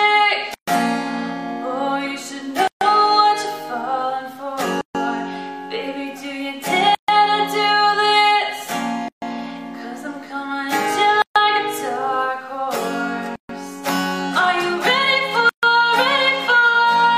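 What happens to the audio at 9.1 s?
Pieces encoded separately were joined untrimmed, leaving a 136 ms gap at a join from 9.08 to 9.22 s: sound drops to silence, then resumes.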